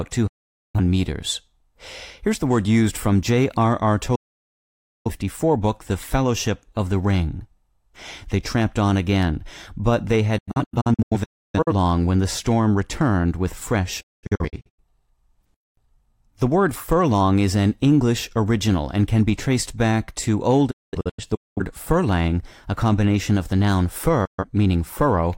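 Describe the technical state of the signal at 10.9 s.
At 10.9 s the speech is inside a digital broadcast dropout running from 10.38 to 11.73 s, between "on again but they" and "when the storm returned". The receiver was failing to decode good frames and muted each time, fading out over about 8 ms. About 0.73 s of sound is lost in several holes spread over 1.3 s, the longest about 0.3 s. Unlike analogue fading, the gaps are clean digital silence with no hiss or noise, and nothing of what was sent survives in them.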